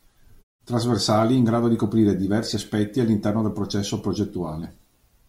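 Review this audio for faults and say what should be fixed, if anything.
Nothing here needs fixing. In the pauses between phrases the background fades to silence and comes back in time for the next sound, with no speech lost.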